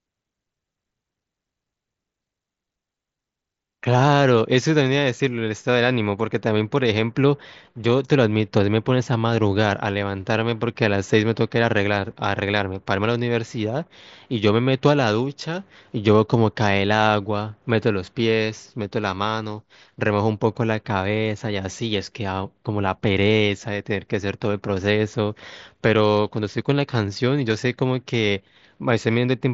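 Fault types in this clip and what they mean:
No faults are present in this speech recording.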